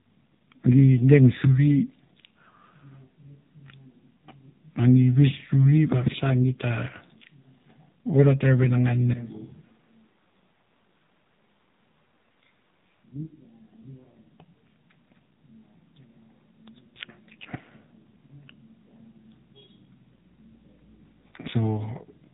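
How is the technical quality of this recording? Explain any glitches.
Poor: mobile-codec damage runs throughout, and one passage sounds distant.

The AMR narrowband mobile codec applies across the whole clip: nothing above 4 kHz, buzzy synthetic speech fitting a very low bitrate near 7.4 kbps, unlike plain low-pass filtering.

From 9.14 to 13.04 s the speech turns suddenly roomy, hollow and much quieter with more background noise, likely a switch to a distant microphone rather than a fade.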